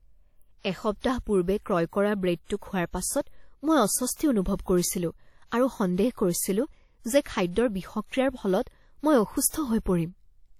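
Speech with plainly audible WMA compression throughout: washy ringing and a hiss that breathes with the signal rather than sitting steady like background noise, likely from a low-bitrate encode that fits 48 kbps, with nothing above 19.4 kHz.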